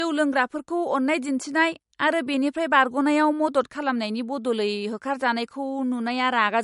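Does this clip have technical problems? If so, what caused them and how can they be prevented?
Yes. Low-bitrate audio saved at a high bitrate runs throughout. The speech has nothing above 11.2 kHz and carries MP3 coding artefacts. That fits a 48 kbit/s MP3, likely re-encoded at 320 kbit/s. The bigger file cannot restore what the first encoding discarded. To prevent it, encode once from the original uncompressed recording, or keep the low-bitrate file as it is instead of re-encoding it.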